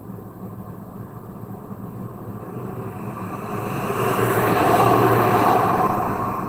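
Opus compression runs through the whole clip, and it's plainly audible: the sound comes across hoarse, rough and grainy rather than swirly. It's likely a low-rate Opus encode in its hybrid speech mode, something around 16 kbps, though the band still reaches about 20.1 kHz.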